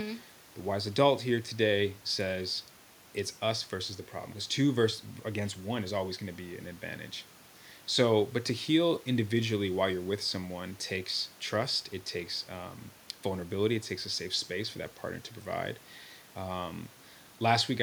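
No technical faults can be heard in this speech recording. The room noise of the recording space sits about 29 dB below the speech.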